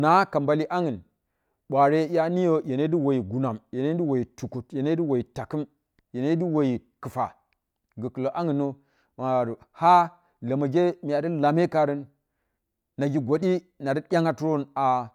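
No technical faults are audible anywhere in the speech recording.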